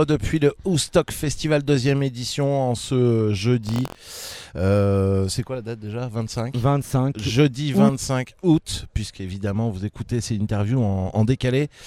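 Buffer tearing runs from 3.65 to 4.45 s: a robotic buzz at about 43 Hz, which fits a 1024-sample buffer. A small slice of each period replays audio from roughly a tenth of a second earlier, with hard joins. Unlike dropouts or clicks, the rattle is steady and periodic and sits only on the signal.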